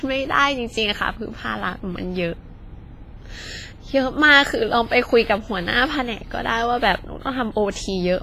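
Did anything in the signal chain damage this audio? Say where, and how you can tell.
Yes, at the codec stage. The speech rings and washes throughout, with hiss that breathes and nothing above 15.5 kHz. This is likely heavy WMA compression, at roughly 24 kbps.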